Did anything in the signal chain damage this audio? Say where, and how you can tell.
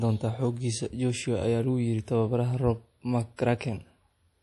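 Yes. Throughout the speech the audio sounds watery and swirly, with chirpy, metallic s sounds, smeared attacks and nothing above 11.5 kHz. The likely cause is MP3 compression at the codec stage, at a rate that fits about 48 kbps, where the encoder cuts the treble and switches weak frequency lines on and off between frames.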